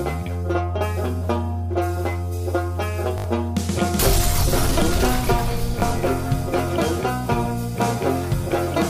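Repeated buffer faults occur at 3.18 to 3.24 s and at 5.80 s. Audio arrived late, so the device replayed its last chunk, which fits a 20 ms buffer. The first is a stutter from several repeats; the second is a single repeat. Each time, a short stretch of the real sound is lost.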